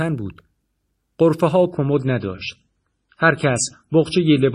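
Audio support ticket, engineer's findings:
Adaptive stream at a lower bitrate, 1.71 s to end. Sudden quality step, no gap. Treble gone above 10.1 kHz, codec artefacts up. Player's adaptive logic switched renditions after connection slowed. Fits MP3 falling from 128 to 24 kbit/s.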